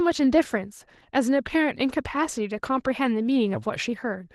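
Throughout the speech, Opus voice compression is plainly audible: a hoarse, faintly robotic graininess from coarsely coded excitation, unlike simple low-pass muffling, because the top end stays present. That points to the hybrid mode at a bitrate around 16 kbps.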